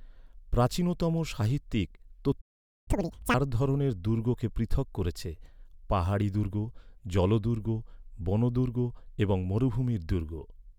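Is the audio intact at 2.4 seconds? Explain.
No. A playback stall cuts the speech to silence from 2.41 to 2.88 s, just after "প্রাচীনতম সাহিত্যিক". It then resumes. The likely cause is the player running out of data.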